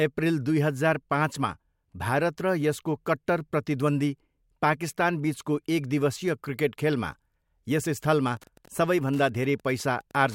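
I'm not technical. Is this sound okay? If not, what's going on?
No. From about 8.25 s until the end of the speech clip at 10.34 s, there is Wi-Fi interference: a faint, steady ticking, roughly ten ticks a second. A nearby Wi-Fi radio sends a short signal every 102.4 ms, and the audio circuit picks up each one as a click. Unlike mobile-phone interference, which makes a buzzy stutter, or mains hum, which is a continuous drone, this is a slow, even tick.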